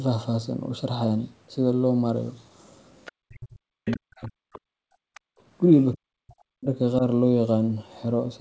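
Faint scraps of a second voice appear at 3.05, 3.86, 4.24, 4.53 and 5.14 s, each about a tenth of a second or less and well below the main speech. This is the other side's voice leaking through, likely loudspeaker echo the canceller failed to remove. Unlike suppression, it adds sound rather than taking it away.

From 3.22 to 4.94 s and again from 5.95 to 6.68 s, the talker's own speech dips sharply, at times by around 40 dB. This is speech suppressed in double talk: with both sides speaking at once, the canceller likely mistook the talker for echo and turned everything down. Here the voice itself drops out, not just the room.

At 5.22 to 5.38 s the room background drops by about 38 dB for roughly 150 ms and then returns. This is background gated by the echo canceller, which clamped the microphone while the loudspeaker played. It affects the background noise, not the talker's speech.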